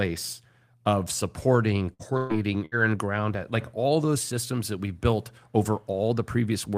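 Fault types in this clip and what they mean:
Burst of packet loss, at 1.93 to 2.02 s, 2.17 to 2.33 s and 2.66 to 2.75 s: several consecutive packets of this speech never arrived in time, so the receiver stretched the last sound it had and let it fade, about 60 ms, 120 ms and 60 ms respectively. Each gap ends with a jump forward, because the same stretch of the original speech is simply gone rather than delayed.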